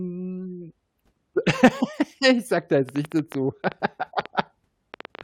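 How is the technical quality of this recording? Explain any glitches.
The recording has two audible faults in its second half, one overlapping the other.

A train of clicks runs from 2.89 to 5.22 s: roughly twenty irregular ticks, about 8.8 per second, peaking about 5 dB above the speech, likely from electrical interference or a faulty connection or power supply.

Damaged data in a compressed stream at 4.02 to 4.04 s makes the decoder lose frame sync and resynchronise, producing a brief blip.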